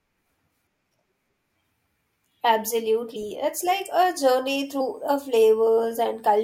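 At 3.15 s, compressed frames are skipped. About two 26.1 ms frames vanish, so the speech jumps ahead by roughly 50 ms. The same skip recurs at 4.80 s. From 4.66 s to the end, a switching supply whistle appears. It is a faint tone drifting between 8.08 and 8.28 kHz, far below the speech.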